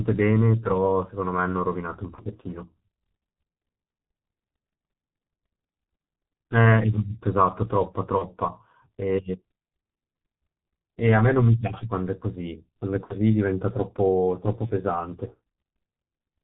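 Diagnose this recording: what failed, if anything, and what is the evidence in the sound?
The whole speech clip has gone through the codec stage and shows heavy G.723.1 codec damage. Nothing above 4 kHz survives, so the voice is muffled and hoarse and consonants smear together. The slow-updating voice model fits a low-rate G.723.1 stream of about 6 kbit/s with 30 ms frames. On a spectrogram there is a hard ceiling at 4 kHz, with coarse, blocky formant bands that step in 30 ms chunks instead of moving smoothly.

VoIP packet loss concealed by the speech codec is a network fault. It appears at 2.15–2.22 s, 8.18–8.26 s, 13.04–13.16 s and 14.66–14.71 s. At each gap the decoder repeats its last pitch and filter at falling gain, so the sound smears into a brief buzzy tone or coloured noise that fades. The voice stays weak or distorted for a moment after each gap. The first, second and fourth gaps fit one lost 30 ms frame each. 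The 13.04 s gap fits two lost frames, about 60 ms. On a spectrogram each gap shows a frozen spectrum. On the waveform the envelope decays smoothly where the speech contour should be.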